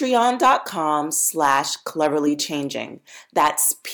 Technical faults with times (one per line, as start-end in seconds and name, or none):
0.15-0.54 hard clipping
1.42-1.59 hard clipping
2.02-2.06 hard clipping
3.37-3.68 hard clipping